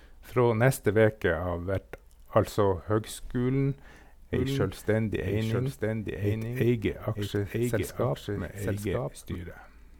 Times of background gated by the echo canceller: none

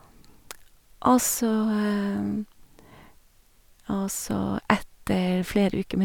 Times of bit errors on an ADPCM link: none

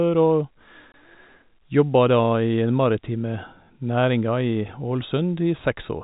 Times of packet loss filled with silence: 0.92

